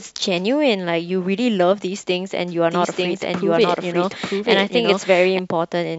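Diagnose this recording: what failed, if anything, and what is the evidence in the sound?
What's failed here is a doubled audio track. From 2.71 s to 5.39 s a second copy of the speech runs underneath, trailing by about a second and sitting at roughly the same level as the original. It's dry and full-band, with no decay or room colour, and it switches on and off abruptly at both ends. That points to a routing or capture-stage problem, most likely a second, slower path also feeding the mix.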